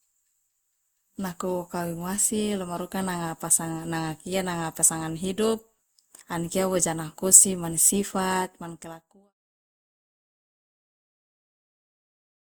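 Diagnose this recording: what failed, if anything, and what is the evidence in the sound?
The codec stage shows generation loss throughout the speech. It sounds swirly, smeared and hollow, with blurred attacks, despite content reaching 20.1 kHz. That fits Opus at 64 kbit/s, likely re-encoded about five times, each pass requantising on a shifted frame grid.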